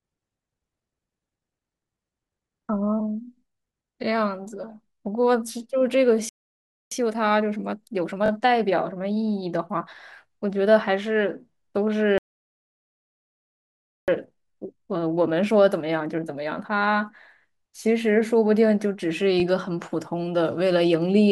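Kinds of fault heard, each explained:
Playback stall: The speech cuts to silence in mid-flow and then goes on. The first gap runs from 6.29 to 6.91 s, about 0.62 s. The second is longer, from 12.18 to 14.08 s, about 1.9 s. The likely cause is the player running short of incoming data, or its thread being held up, until it could continue.
Time-compressed catch-up: Right after each stall, the speech runs fast but keeps its normal pitch. The player is clearing the backlog that built up during the silence. It removes small slices of audio and cross-fades across the joins. Here the speech plays at 1.15 times normal speed, from 6.91 to 9.95 s and again from 14.08 to 17.08 s. Then the pace returns to normal.
Repeated buffer: A tiny piece of sound is played again with a hard edge at each join. It comes across as a quick buzzy stutter rather than a repeated syllable. From 8.26 to 8.30 s one slice sounds three times in total. 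At 19.4 s one slice sounds twice. Each repeat lasts about 20 ms, which fits a 20 ms device buffer replayed because fresh audio was late. No speech seems to be lost.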